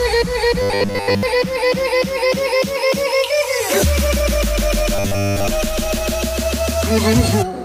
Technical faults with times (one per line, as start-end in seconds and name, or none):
0.62-1.23 robotic sound from repeated short buffers
4.95-5.50 robotic sound from repeated short buffers